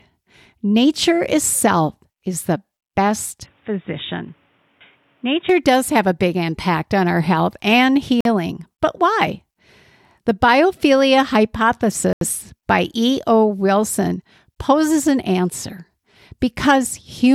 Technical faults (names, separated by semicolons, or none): input switched to a poorer device; Bluetooth stall